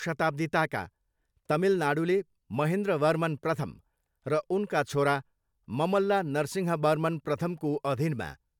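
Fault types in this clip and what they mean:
No faults are audible here.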